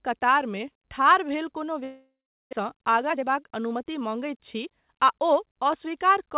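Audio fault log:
1.84–2.55 s, long network dropout after "कतारमे ठाढ़ भेल कोनो": sound stalls, the tail is stretched into a fading buzz, then about 0.39 s of silence; likely a network outage.
2.63–4.89 s, jitter buffer speed-up: speech runs about 11% fast at unchanged pitch as the receiver trims pitch periods to drain the built-up delay, roughly 0.3 s.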